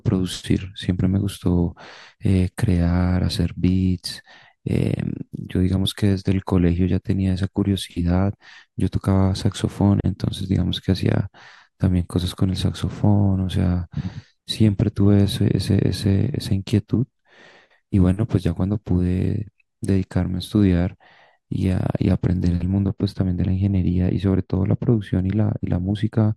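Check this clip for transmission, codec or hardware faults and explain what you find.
One fault, near the end of the speech. From 22.67 s to 26.36 s, de-emphasis is applied wrongly: a treble-cut filter meant to reverse pre-emphasis acts on audio that was never boosted, or reverses it a second time. The high end falls away smoothly, by about 13 dB at 10 kHz relative to 1 kHz, so the last few seconds sound dull and muffled, as if heard through a cloth.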